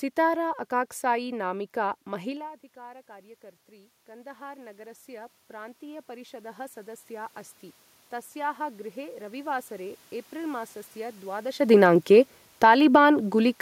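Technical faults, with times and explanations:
2.06–7.38 s, automatic gain rising: after the input drops by about 21 dB, as the talker moves away near 2.5 s, the control slowly adds about 12 dB, so voice and room noise swell together.
8.09–11.58 s, automatic gain rising: the gain climbs again by about 5 dB, lifting the voice and the background room noise gradually together.
11.6–13.57 s, automatic gain falling: with the talker moving near 11.5 s, the control finds the input too loud or its background too strong, so the gain sinks by about 4 dB and the background drops with it.
12.84–13.38 s, automatic gain rising: within that fall, a brief counter-swing of about 5 dB briefly lifts voice and room noise.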